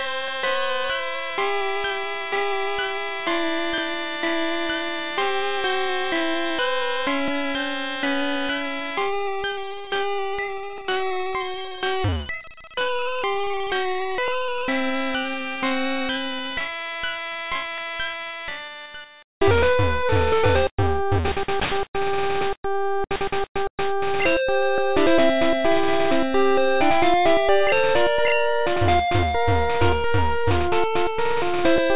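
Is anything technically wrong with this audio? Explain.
No, nothing technically wrong can be heard anywhere in this audio.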